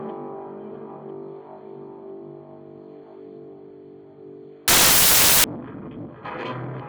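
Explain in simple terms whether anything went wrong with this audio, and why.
From 4.68 to 5.44 s, samples were built from the wrong bytes: each value's bytes were joined wrongly, so the sound turns into a loud burst of hiss.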